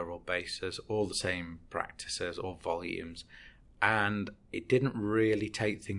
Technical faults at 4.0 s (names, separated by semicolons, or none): none